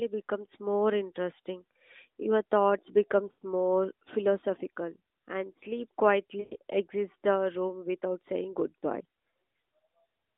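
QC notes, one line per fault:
3.32–3.42 s, lost AMR speech frames: for about 0.1 s the speech smears into a held sound that sinks toward silence, which fits roughly five lost 20 ms frames. The decoder keeps repeating the last good pitch and vocal tract shape at falling gain, so the sound stretches and fades before speech resumes.
6.40–6.56 s, lost AMR speech frames: a longer run, about 0.12 s, which fits roughly six lost frames. The concealment stretches the sound and fades it close to silence before speech resumes. The held sound stays within the narrowband AMR line, about 250 Hz to 3.7 kHz.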